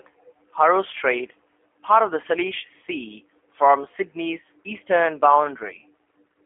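Speech squeezed through a G.729 codec the whole way through: narrowband, roughly 250 Hz to 3.4 kHz, with a plainly rough, synthetic edge that fits 8 kbit/s.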